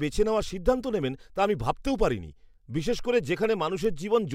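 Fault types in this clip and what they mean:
word clock ticks: The receiving device runs on its own clock, slightly out of step with the sender's (an error of around 20 ppm), so a single sample is dropped or doubled each time the clocks slip. Shortly after "বেছে নেওয়ার সিদ্ধান্ত নেবেন", from 1.24 s to 3.85 s, three or so sharp ticks fall roughly every 1.5 seconds. That steady spacing and the absence of any gap set them apart from buffer dropouts, which leave audible holes.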